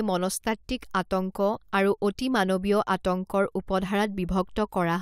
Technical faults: none

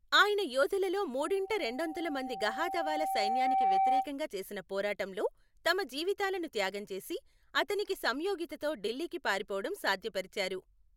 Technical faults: loudspeaker feedback squeal

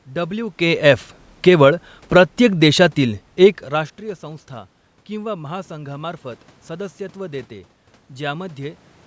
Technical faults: automatic gain falling

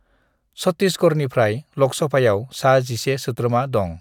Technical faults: none

